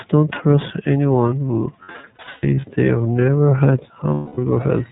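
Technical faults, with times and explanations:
Throughout: iLBC codec. The whole clip is narrowband speech, with nothing above 4 kHz, so it sounds dull and boxed-in. The coding damage is plainly audible as a slightly rough, synthetic edge on the voice. This comes from each frame's excitation being coded on its own at a low rate. The sound fits the 13.33 kbps mode with its 30 ms frames.
1.82 to 2.65 s: lost iLBC frames. About 360 ms of audio is missing, scattered across 810 ms. That points to around twelve lost 30 ms frames. The longest run is roughly a tenth of a second. In each gap the decoder repeats the last pitch cycle mixed with noise. This gives short, buzzy held-vowel patches between stretches of normal speech.
4.14 to 4.38 s: lost iLBC frames. This is one unbroken 240 ms loss, which points to eight frames in a row. The concealment holds a buzzy, breathy vowel that fades as it goes on. 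Because iLBC frames stand alone, the speech comes back clean almost at once afterwards.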